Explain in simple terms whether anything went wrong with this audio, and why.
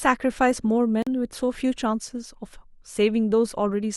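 Block of digital silence at 1.02 s: the speech cuts to dead silence for 43 ms, suggesting the playback program briefly fell behind.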